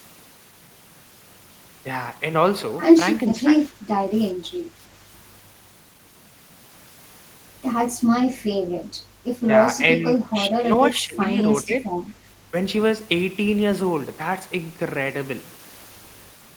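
Speech suppressed in double talk occurs at 3.27–4.04 s, 9.98–10.35 s, 10.51–11.39 s and 11.64–11.94 s. The speech dips by about 10 dB, and nearer 15 dB in the third stretch, likely because an echo canceller, unable to separate the talker from loudspeaker echo while both sides spoke, turned everything down.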